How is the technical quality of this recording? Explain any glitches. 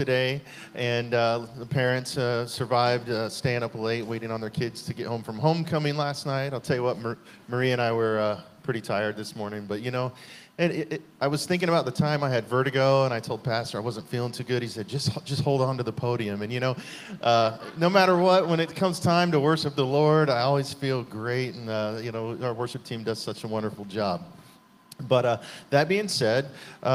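Nothing here needs explaining, since there are no glitches to point to anywhere in the recording and it all holds together fine.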